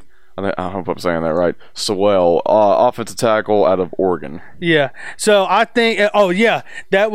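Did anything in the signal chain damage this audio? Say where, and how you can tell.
No, nothing in the signal chain damaged this speech.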